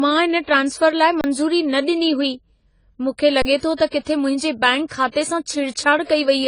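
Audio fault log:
throughout: AAC compression, likely the cause of the dull, smeared character. Nothing is present above 10 kHz, and the coarsely quantised high bands give the speech a warbling, fizzy edge on sibilants. The plainly audible damage fits a low bitrate around 24 kbps.
1.21–1.24 s and 3.42–3.45 s: underrun with held sample. The first comes just after "इन ट्रांस्फर लाइ". Each time the output buffer ran dry for 30 ms and the converter held its last value, so the waveform flatlines and the sound drops out. Roughly 30 ms of live audio was skipped.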